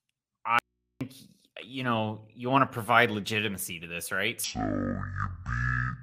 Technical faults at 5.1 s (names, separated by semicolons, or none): section at the wrong speed